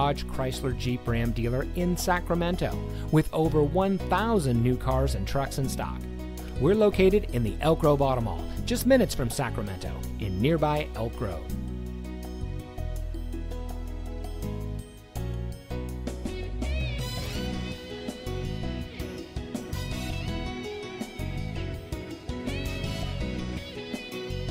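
Nothing is technically wrong with the clip; no faults can be heard anywhere in it.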